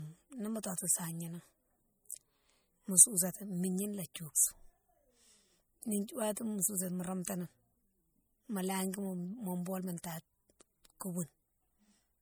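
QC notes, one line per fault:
Throughout: low-bitrate audio saved at a high bitrate. The speech keeps the coding artefacts of a heavy MP3 pass, which points to roughly 64 kbit/s, likely re-encoded as 320 kbit/s MP3. The larger second encode cannot restore detail already discarded. Nothing is present above 20.1 kHz.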